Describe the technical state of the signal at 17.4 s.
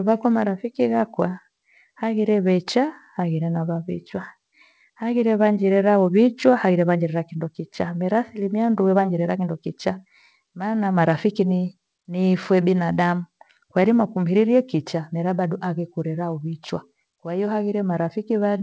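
At 17.4 s the speech is intact, with no fault, and like the rest of the call path through what sounds like a wideband G.722 codec it carries nothing above 8 kHz.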